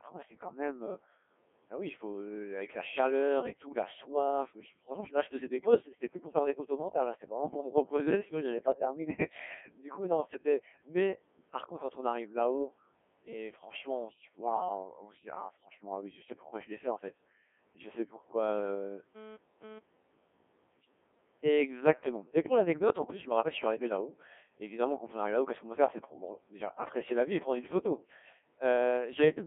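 It's a speech clip, and the whole thing has gone through a Codec 2 vocoder. It's robotic and buzzy, squeezed into roughly 200 Hz to 3.5 kHz, and the heavy smearing fits something around 1.6 kbit/s resynthesised from sine waves. At 5.70 to 5.82 s, between "là je faisais des" and "c'était plus pour faire", bit errors on the digital voice radio make the pitch and tone lurch into a brief garbled warble, which points to a couple of corrupted frames at an error rate of around 2 percent. Then from 18.55 to 19.79 s there's GSM phone buzz, a raspy 217 Hz burst pattern with lots of harmonics about 16 dB under the speech, coming and going as a nearby phone does a data transfer.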